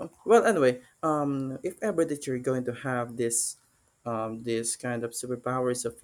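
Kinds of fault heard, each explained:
No technical faults heard.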